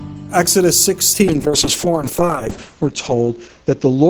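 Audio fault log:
1.29 to 4.09 s, call bitrate drop: the starved encoder codes coarsely and narrows the band from 20 kHz to 8 kHz, which fits a 32 to 7 kbps fall.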